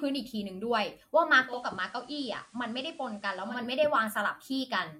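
Digital radio blending to analogue from 1.44 to 3.62 s: the receiver lost its digital stream and cross-faded over 197 ms to the station's FM broadcast. The speech drops about 3 dB and gains faint hiss, then blends back.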